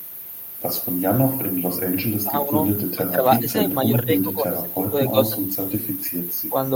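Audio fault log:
2.21–2.50 s, 2.95–3.25 s and 3.41–4.95 s: speech suppressed in double talk. The speech dips by roughly 15 dB, briefly in the first two stretches and for about a second across the third. This is likely an echo canceller mistaking overlapping talk for echo and turning the near side down with it.
5.06–5.10 s: echo leak. A faint scrap of speech returns about 285 ms late, around 15 dB below the direct speech. This is likely loudspeaker sound at the far end reaching its microphone and slipping past the echo canceller there, so a delayed remnant is sent back.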